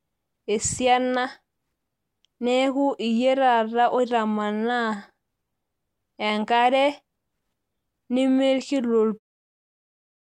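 No technical faults are audible in this speech.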